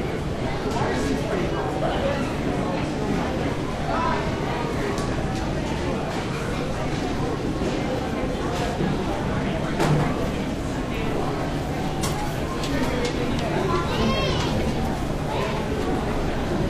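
Nothing stood out as a technical problem on listening to this recording of everyday sounds.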